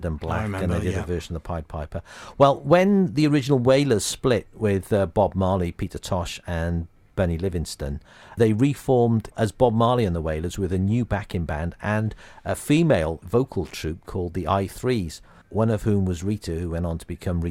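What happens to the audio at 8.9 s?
At 8.9 s the speech continues intact, with no dropout, click, distortion or other technical fault.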